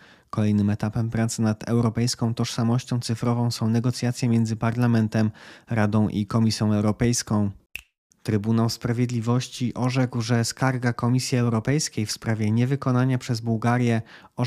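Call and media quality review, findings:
No technical faults found in the speech signal; level, continuity and timing stay consistent throughout.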